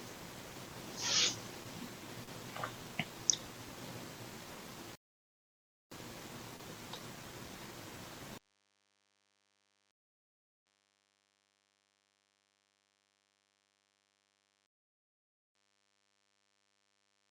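A nearby DECT cordless phone's 100 Hz radio bursts are rectified by the audio circuit, producing a faint, thin DECT buzz throughout, roughly 35 dB below the speech. The player then runs out of downloaded audio three times, causing rebuffering stalls: silence from 4.95 to 5.92 s, 9.92 to 10.67 s, and 14.67 to 15.55 s. Each adds 0.96, 0.75 and 0.88 s, after which the speech resumes exactly where it stopped.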